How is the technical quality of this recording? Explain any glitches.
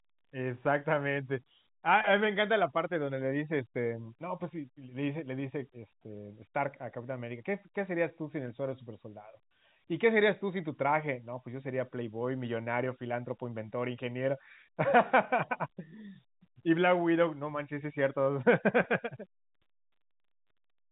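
No glitches are audible.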